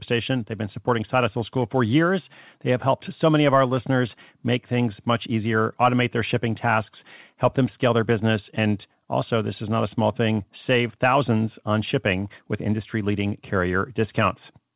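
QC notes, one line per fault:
No faults to note.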